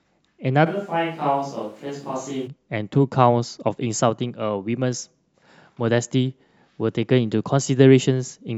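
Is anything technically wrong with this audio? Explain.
Yes. From 0.68 s to 2.46 s the speech suddenly turns roomy and hollow. The bass thins out and the level drops by roughly ten decibels. Background room noise becomes audible, around 35 dB below the speech. At 2.46 s the close, full sound returns just as abruptly. This is likely a switch to a distant microphone. The close microphone's signal dropped out, and a far-off one, such as a camera's, filled the gap.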